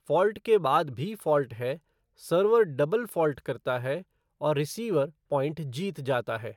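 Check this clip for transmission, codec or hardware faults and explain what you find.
Nothing turned up here: the speech comes across without any transmission, codec or hardware problem I can hear.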